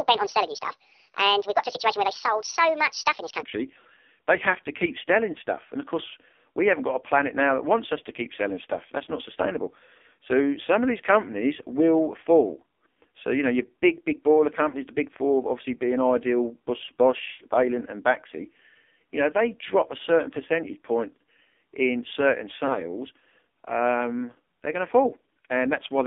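The whole clip runs through the AMR narrowband mobile codec, squeezed to roughly 250 Hz to 3.5 kHz, heavily buzzy and synthetic, which fits a low mode near 5.9 kbps.

From the start to 3.43 s a section plays at the wrong speed, 1.65 times too fast, pitching the speech up nearly an octave. The likely cause is playback on the wrong clock.

Lost AMR speech frames cause brief warbly dips at 5.33 s (about 20 ms), 14.69 to 14.76 s (about 40 ms) and 22.67 to 22.82 s, where the decoder patches over them with faded, repeated sound.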